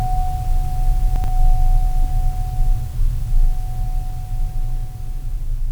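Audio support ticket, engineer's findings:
Chunks out of order, 1.16–1.28 s: jumbled moment in the music. One 40 ms chunk arrives two chunks late, playing after its successors; three hard joins. Unlike a dropout, nothing missing, only reordered. Probably jitter buffer/reordering stage.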